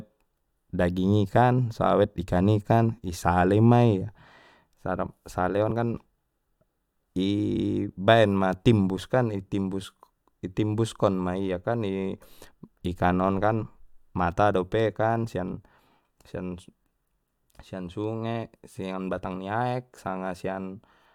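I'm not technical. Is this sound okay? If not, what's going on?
No. At 9.83 s, compressed frames are skipped: one chunk of about a fiftieth of a second drops out, so the audio jumps ahead.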